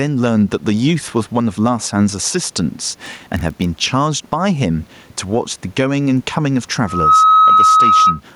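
A speech recording with gain pumping throughout, with a swing of around 10 dB, squashing the level range. The likely cause is gain set far too high for the microphone and a fast limiter or compressor clamping down on every peak. The room noise sits about 44 dB below the speech. From 2.85 to 3.66 s there is a block size mismatch (padded): a 43.1 Hz buzz as one stage writes short blocks and the next reads full ones, zero-filling the remainder of each, which fits a 1024-sample read block. The playback slows only negligibly, at a ratio of 0.999.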